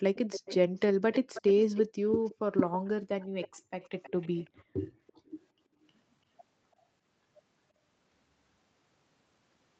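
A speech recording with two faults. An echo leak is heard at 0.15–0.8 s, 1.12–1.83 s, 2.25–2.35 s, 3.2–4.63 s and 5.07–5.31 s. A delayed copy of the talker trails the original by 317 ms, and by 336 ms in the last stretch. It sits about 15, 10, 25, 25 and 35 dB below the speech. The likely cause is a far-end loudspeaker whose sound reached its microphone and escaped the echo canceller. The background is also gated by the echo canceller. Room sound drops by about 38 dB at 3.6–3.72 s, roughly a tenth of a second. It drops by about 40 dB at 4.64–5.26 s, for under half a second. Here the canceller clamped the microphone down hard while playback ran, then released it. The audio holds nothing above 8 kHz, which fits an Opus call path at 24 kbps.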